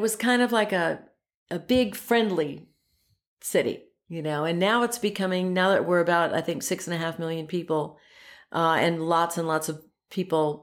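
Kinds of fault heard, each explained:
No kinds of fault are heard in this speech.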